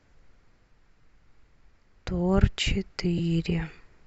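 At 1.01 to 1.03 s and again at 3.18 to 3.20 s, the speech smears into a brief noisy blur: lost LE Audio frames. The LC3 decoder covered each gap, about 22.5 ms then 15 ms, fitting a few frames, by repeating the last spectrum with scrambled signs.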